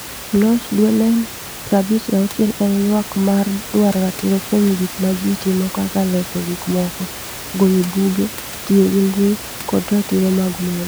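No technical faults can be heard anywhere in this speech recording. The room's own background noise sits about 14 dB below the speech, as part of the recording itself.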